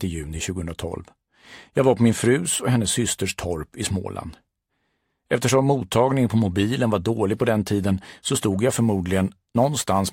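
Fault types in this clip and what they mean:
sample clock jitter: the converter's clock wanders by a few microseconds, so timing errors grow with the waveform's slope. From 8.73 s to the end, a roughness about 25 dB below the signal follows loud, bright sound, while steady hiss would persist through silence.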